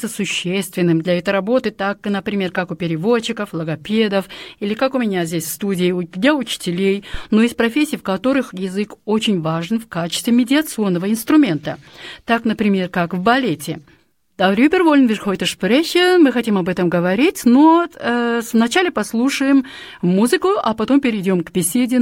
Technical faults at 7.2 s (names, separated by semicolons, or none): phantom power thump